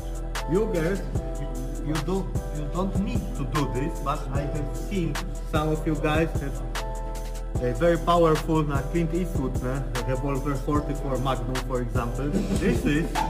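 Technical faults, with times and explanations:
Throughout, crude rate conversion: samples appear dropped without filtering, which fits 48 kHz to 44.1 kHz, leaving inharmonic fizz about 30 dB below the sound.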